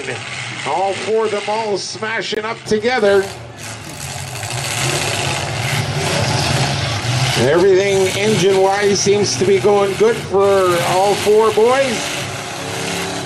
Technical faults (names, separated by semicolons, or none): input switched to a poorer device; corrupt frame muted